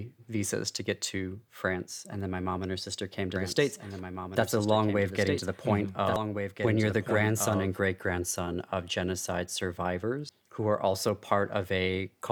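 From 3.36 s to 7.79 s the speech is joined by a doubled audio track: a second, full-band copy trailing about a second and a half behind, roughly 5 dB quieter. It is likely caused by a slower capture path or an out-of-step edit. On a spectrogram the same harmonic patterns repeat, shifted right, with no reverberant smear, and the copy begins and ends with hard edges in the waveform.

Damaged data in a compressed stream appears twice, at 6.16 to 6.19 s and at 10.29 to 10.32 s. Each time the decoder misreads corrupted frames and loses sync, producing a brief glitch as it searches for the next frame header. Each shows as a short broadband smear or block, with a discontinuity in the waveform.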